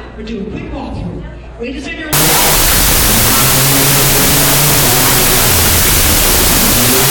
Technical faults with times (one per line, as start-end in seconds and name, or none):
2.13-7.10 wrong sample width